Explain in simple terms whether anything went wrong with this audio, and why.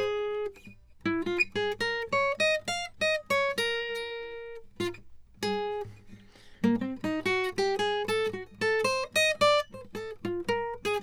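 Nothing went wrong here: the music comes through without any audible technical fault.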